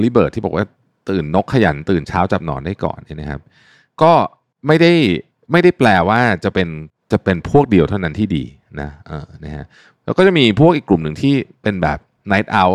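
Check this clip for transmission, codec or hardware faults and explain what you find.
One hardware fault runs through the clip: clock slip clicks from 0.10 s to 12.72 s. A single sample is dropped or repeated roughly every 30 ms, likely because two unsynchronised device clocks differ by around 700 ppm. This gives a soft rattle over the speech. A spectrogram shows evenly spaced faint vertical lines, and the waveform shows tiny single-sample steps.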